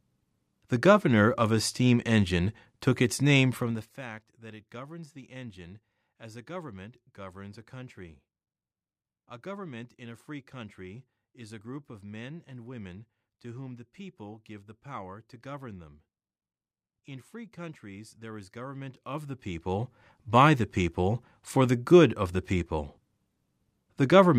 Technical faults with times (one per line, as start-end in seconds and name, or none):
3.54-4.05 zipper noise
18.60-20.10 zipper noise